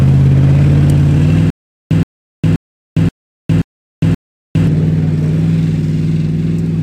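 The audio has a stutter with silent gaps from 1.50 to 4.67 s: one 122 ms fragment plays six times, each followed by 407 ms of digital silence, every 529 ms. Unlike random dropouts, the identical repeats at a fixed pace likely come from a stalled player retrying its buffer.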